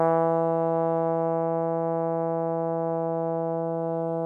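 Nothing technical stands out in this short piece of music; it just runs along without any audible problems.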